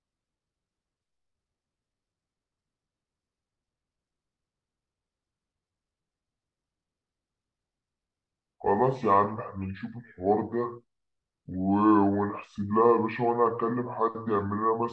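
From start to finish, the speech runs slow and low, the signature of a wrong sample rate. The samples are played at a lower rate than they were captured at, with no resampling, so timing and pitch drop together by the same factor. Everything runs at about 0.69 times normal speed and sits about 6.5 semitones flat, which fits a 32 kHz recording played back at 22 kHz, giving a sluggish, deepened, drawn-out voice.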